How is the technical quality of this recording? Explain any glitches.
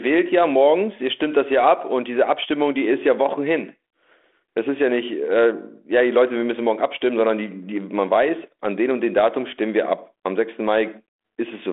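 No audible glitches or faults.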